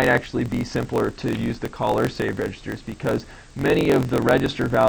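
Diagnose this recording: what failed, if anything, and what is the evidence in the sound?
The fault is a block size mismatch (truncated) in the driver or buffer stage, present from start to finish. A steady buzz at about 45.9 Hz runs under the sound, and everything plays about 1.07 times fast while timbre stays normal, which fits a writer producing 1024-sample blocks that the next stage reads only partly, discarding each tail. A sample-rate mismatch would shift pitch along with tempo, and 45.9 Hz matches neither 50 nor 60 Hz mains hum.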